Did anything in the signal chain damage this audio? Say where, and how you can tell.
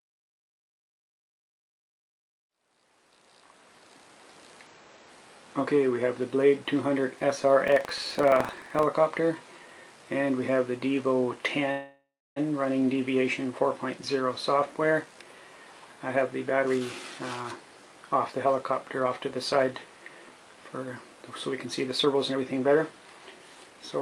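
Yes. At the driver or buffer stage, buffer tearing runs from 7.64 to 8.87 s. A rough buzz at 23.4 Hz rides on the sound, which fits a 2048-sample buffer. Writer and reader have slipped. A small slice of each period replays audio about a tenth of a second old.

At the network stage, a call audio freeze runs from 11.71 to 12.38 s. The sound stretches into a fading buzz, then about 300 ms of silence, filling 648 ms. Nothing is lost afterwards. The likely cause is delayed packets draining the jitter buffer.

Jitter buffer speed-up follows, also in call processing. It hits 16.16 to 16.81 s at 127% speed, 18.15 to 19.67 s at 108%, 21.65 to 22.77 s at 116%, and 23.39 to 24.01 s at 110%. Pitch holds, but the pace hurries. Short pitch-period pieces are cut to shed the built-up delay.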